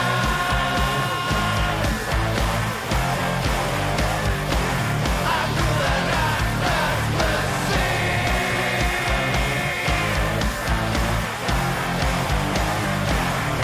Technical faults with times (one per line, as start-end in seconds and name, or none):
none